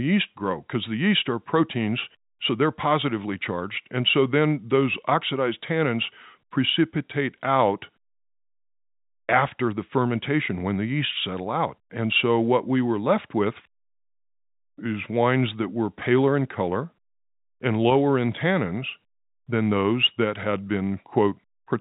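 No technical faults are audible.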